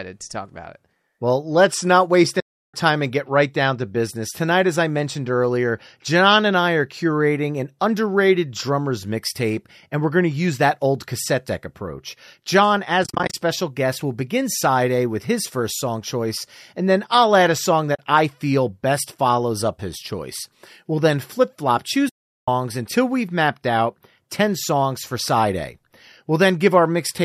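Speech that fades softly into silence and back at 2.40–2.74 s, 13.04–13.34 s (broken into brief dropouts), 17.95–17.99 s and 22.09–22.48 s. This is AAC frame loss with muting: the decoder zeroed the missing frames of what is likely a low-delay AAC stream.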